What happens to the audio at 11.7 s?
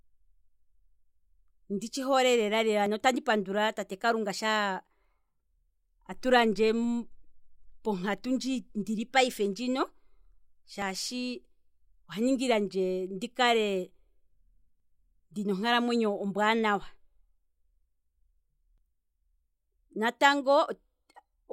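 Nothing goes wrong at 11.7 s; the speech there plays through intact, with no dropout, click or distortion at that moment.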